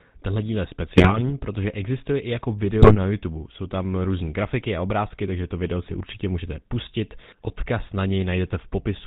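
A Czech speech recording carries GSM full-rate codec damage throughout, plainly audible as a buzzy, gravelly roughness, which fits 13 kbps full-rate GSM. Pulse-driven vocal-tract modelling coarsens the excitation, and a spectrogram shows an empty band above 4 kHz with smeared, grainy harmonics. GSM bit errors then break the voice into squawks and gargling at 0.97–1.31 s just after "díl je", 2.82–2.96 s after "protože existuje i jako", 5.84–5.95 s between "obrázky takže to video" and "určitě můžete pustit", and 7.47–7.52 s. Corrupted filter, pitch and gain values distort whole frames, appearing as sudden amplitude spikes in the waveform and abrupt, blocky spectral smears.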